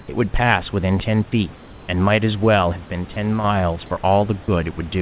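Right at the start, from 0.00 to 0.08 s, there's comfort noise in place of the background. The real room noise, sitting about 26 dB below the loud parts, gives way to a flat, featureless hiss about 1 dB quieter, likely synthetic noise filled in while the sender paused transmission.

Later, sound gets dropped by the voice detector twice, at 3.14–3.16 s and 4.44–4.48 s. Roughly 10 ms and then 20 ms of actual sound vanish into that same steady noise, likely because the detector mistook the sound for background, all within the call's 4 kHz-limited band.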